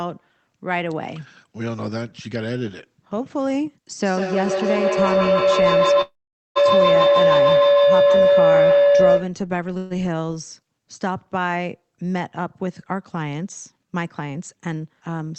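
Speech, and it's got a proper feedback howl from 4.01 to 9.41 s, a tone somewhere around 500 Hz that swells to about 8 dB above the speech, with the loop coming round roughly every 150 ms. That's two devices in the same room on the call, each picking up the other's loudspeaker so the loop gains a bit on every trip until it rings. Inside that stretch, at 6.01 s, the audio stalls and mostly drops to silence before picking up again at 6.58 s, putting in a gap of 0.54 s without losing anything. There's a shorter stall from 9.78 to 9.93 s, where the last sound is carried on as a buzz or hiss for 0.13 s. Both are likely a call audio freeze, with packets held up until the jitter buffer ran dry. Then from 13.72 to 15.10 s the speech runs hurried at 108% speed but keeps its pitch. That's a jitter buffer speed-up, where the receiver trims tiny pitch-period slices, about a tenth of a second in total, to shed the extra delay that built up.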